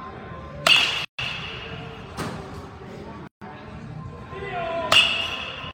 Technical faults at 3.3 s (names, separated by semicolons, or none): gap at a join of encoded pieces